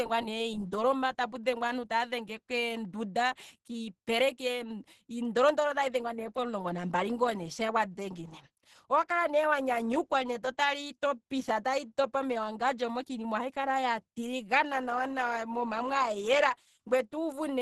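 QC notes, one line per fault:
throughout, Opus compression: the speech sounds hoarse, grainy and rough, with a muffled quality and nothing at all above about 12.3 kHz. This is likely heavy Opus coding in its hybrid mode, where a speech coder handles the lower band and the upper range is rebuilt coarsely from folded bands and noise rather than held in detail. The super-wideband ceiling and the degree of damage fit a bitrate around 12 kbps.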